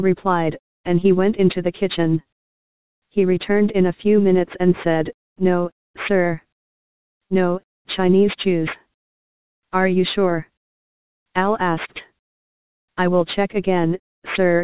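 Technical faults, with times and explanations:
Throughout, aliasing: high content folds back as gritty, metallic tones at unrelated pitches, about 20 dB down, from downsampling without filtering above a 4 kHz fold.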